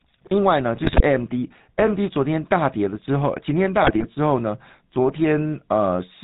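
The whole clip runs through the GSM full-rate codec, which fits a 13 kbps stream. It's a vocal-tract model fed with sparse, regularly spaced pulses, so the speech picks up that gravelly, buzzy edge, and everything above 4 kHz is gone. The damage is plainly audible.

From 0.76 to 1.02 s, GSM bit errors kick in. Corrupted filter, pitch and gain values reach the decoder, so the spectrum warps and the level jumps frame by frame, and the speech breaks into squawks and gargling. It happens again, a bit milder, from 3.82 to 4.05 s.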